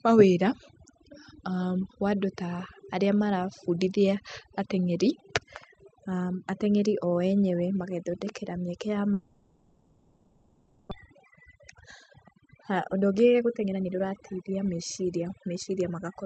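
Throughout the speech, overdone noise removal is audible: the suppressor pushes individual frequency bands down or out whenever they sit close to its noise estimate, so the background becomes near silence dotted with twinkling specks, and the softer parts of the voice are eaten away. Unlike a plain low-pass or band-limit, the loss flickers band by band over time. The top end also stops near 8 kHz, as the Opus call path does.

From 9.13 to 10.93 s the speech gives way to a smeared continuation of the last sound, a decaying buzzy hiss carried across the whole 1.8 s with no true silence. This is most likely a long network dropout: about a second of audio never arrived and is simply missing when speech resumes. Unlike a brief packet-loss glitch, the concealment stretches well past a few tenths of a second and the lost passage does not return.

Right after, the speech speeds up twice, from 11.01 to 11.53 s at 112% and from 12.12 to 15.81 s at 119%. 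This is a jitter buffer speed-up. The receiver is draining roughly 0.7 s of excess delay built up around the outage by cutting out short pitch-period slices. That removes a little under a tenth of a second in the first stretch and around 0.7 s in the second. The speech sounds hurried while the pitch stays put, unlike a tape-style speed change that would raise it.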